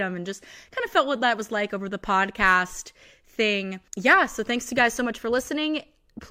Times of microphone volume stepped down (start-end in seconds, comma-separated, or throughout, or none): none